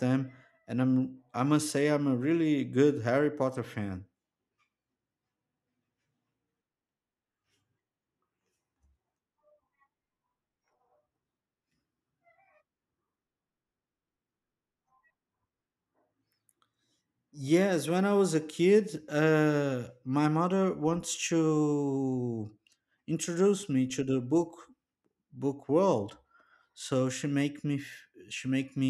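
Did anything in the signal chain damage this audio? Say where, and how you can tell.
No, nothing in the signal chain damaged this recording.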